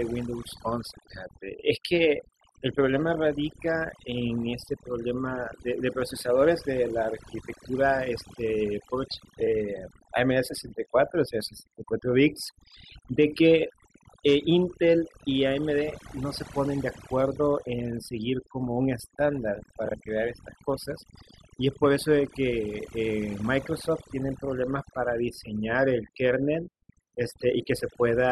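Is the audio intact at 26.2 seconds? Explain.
No, overdone noise removal runs through the whole clip: the aggressive reduction zeroes bands near the noise floor, leaving twinkly near-silence.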